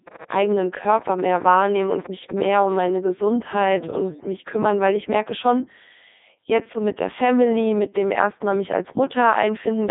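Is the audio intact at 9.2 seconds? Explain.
No. At 9.2 s the speech is robotic and buzzy, confined to a narrow telephone-like band of roughly 250 Hz to 3.7 kHz, with nothing above 3.8 kHz. This is Codec 2 vocoder damage, present across the whole clip. The codec keeps no waveform. It sends only pitch, voicing, energy and a spectral envelope, and the decoder rebuilds the voice from sine waves. The heavy damage fits its 3.2 kbit/s mode.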